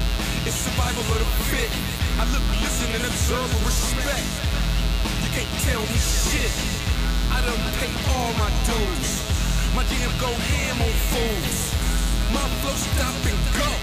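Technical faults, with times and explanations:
Throughout: mains buzz. A steady, raspy buzz sits under the whole clip, about 10 dB below the sound itself. It is built on the 60 Hz mains frequency. Sharp switching spikes, arriving twice per mains cycle, leak into the signal path, likely from a dimmer, a rectifier or an unshielded cable. Because those spikes are so abrupt, they carry a dense stack of 60 Hz harmonics up into the kilohertz range. That is what makes it rasp rather than hum.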